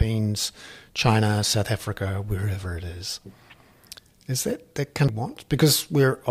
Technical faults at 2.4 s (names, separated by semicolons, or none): none